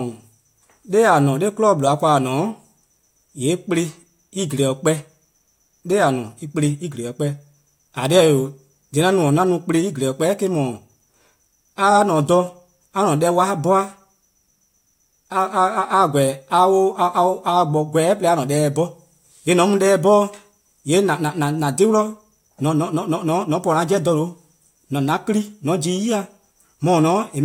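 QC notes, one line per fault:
No faults found.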